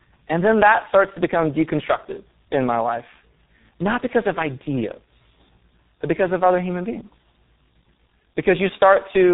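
Rough, muffled and warbly throughout, with nothing above 3.8 kHz: tandem speech coding, the audio re-encoded across two speech codecs, which fits G.726 feeding G.723.1.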